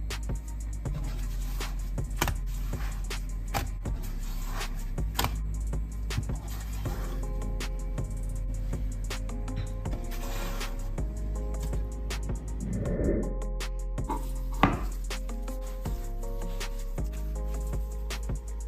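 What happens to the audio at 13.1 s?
Nothing goes wrong at 13.1 s: the audio runs through that moment intact, with no dropout, click, distortion or other fault to be heard.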